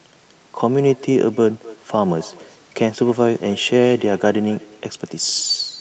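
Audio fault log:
Throughout: echo with no canceller. Every stretch of speech is followed, around 300 ms later, by a faint copy sitting about 22 dB below the direct signal. The far end is playing the call over a loudspeaker, its microphone picks that playback up, and no echo canceller removes it before it returns over the network. The delayed copy sounds thin, and its top end stops near 8 kHz like the direct path.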